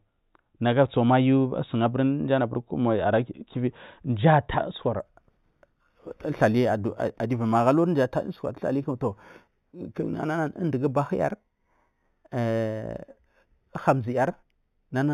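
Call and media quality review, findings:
Imaging from linear upsampling, 5.0 s to end, after "mji a tar usukwar". The resampler uses straight-line interpolation, which fits 8 kHz material raised to 48 kHz. Dulled top band, with a mirror image at 4 to 8 kHz about 35 dB down, adding faint metallic shimmer on sibilants.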